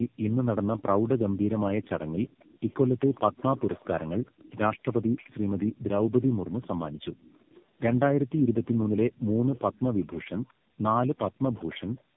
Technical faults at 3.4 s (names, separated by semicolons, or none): tandem speech coding; echo leak